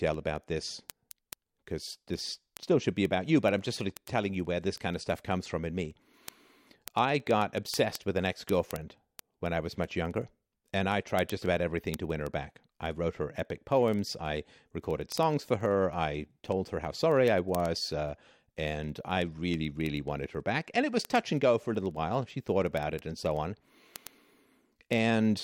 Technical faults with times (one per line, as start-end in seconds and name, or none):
0.14-25.41 word clock ticks